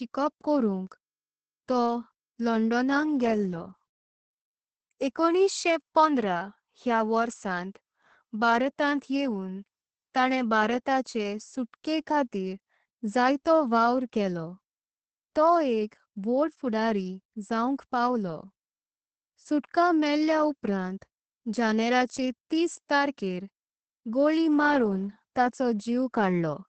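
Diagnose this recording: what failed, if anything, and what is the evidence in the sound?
Speech sounds muffled, hoarse and slightly robotic throughout, with nothing above 8.6 kHz. This is Opus voice compression at the codec stage, with coarse linear-prediction coding that fits about 10 kbps.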